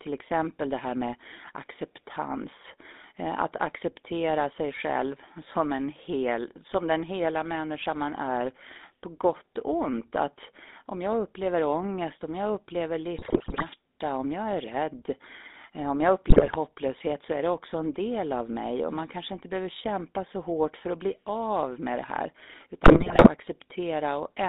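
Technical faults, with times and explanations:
Throughout: GSM full-rate codec. The speech runs through a vocal-tract model driven by regularly spaced pulses at about 13 kbps, confined to roughly 250 Hz to 3.7 kHz, giving a steady buzzy, gravelly roughness. The roughness stays constant rather than breaking into bursts, which separates it from link errors.
13.18–13.64 s, 16.28–16.55 s, 22.84–23.28 s: GSM bit errors. Corrupted bits reach the decoder in three short bursts, with about 5 to 6 percent of bits flipped, warping the filter, pitch and gain values frame by frame. The speech briefly squawks, pops and gargles, then returns to the plain codec buzz.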